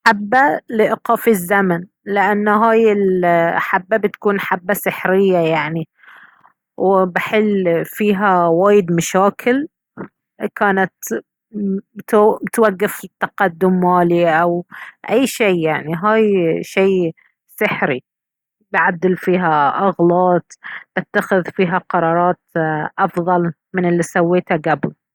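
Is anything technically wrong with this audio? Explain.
No, nothing in this speech recording stood out as technically wrong on listening.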